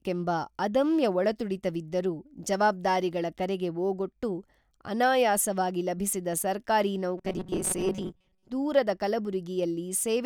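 A speech recording with one fault: robotic sound from repeated short buffers, from 7.18 to 8.48 s. The voice becomes a rigid metallic buzz at 188 Hz. The likely cause is a tiny slice of about 5.3 ms looping in place of most of the real audio.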